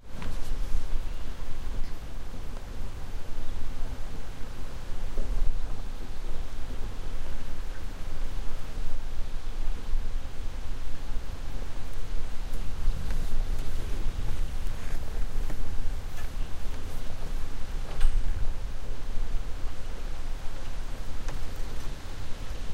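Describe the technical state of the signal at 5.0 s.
At 5.0 s the audio is intact, with no fault to be heard at that point.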